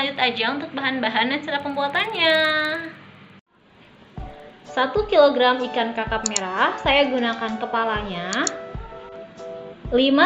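From 1.5 to 4.7 s, a regular 20 Hz ticking rides on the sound. This is a resampler restarted on every block: each 50 ms block was converted alone, which fits 16 kHz to 48 kHz, leaving an error at each edge. Unlike hum, it stops with the signal.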